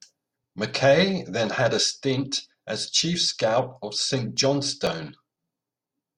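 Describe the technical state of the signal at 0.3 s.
At 0.3 s the signal is intact, with no audible dropout, distortion, clipping or other fault.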